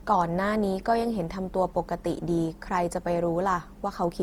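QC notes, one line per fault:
Throughout: generation loss. Speech sounds swirly, smeared and hollow, with blurred attacks. Likely repeated lossy re-encoding, around five passes, fitting Opus at 48 kbit/s.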